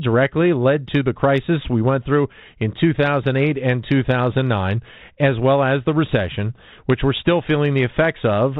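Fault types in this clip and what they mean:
Nothing stood out on listening to this speech recording.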